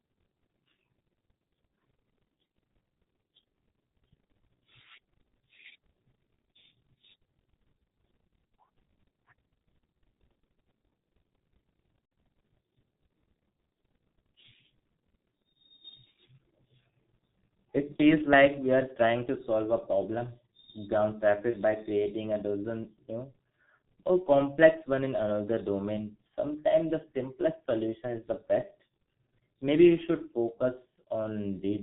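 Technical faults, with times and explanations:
Throughout: G.723.1 codec. Heavy coding damage makes the speech muffled and hoarse, with nothing above 4 kHz and smeared consonants. This fits a rate near 6.3 kbit/s.
12.05–12.11 s, 17.96–18.01 s, 21.50–21.57 s, 24.23–24.29 s: VoIP packet loss concealed by the speech codec. The decoder fills missing audio by stretching the last sound, so each gap turns briefly into a buzzy tone or coloured noise that fades. The longest gap is about 60 ms, at 12.05 s.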